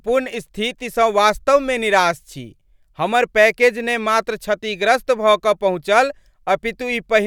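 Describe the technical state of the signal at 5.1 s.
At 5.1 s the speech signal is intact, with no audible fault at that moment.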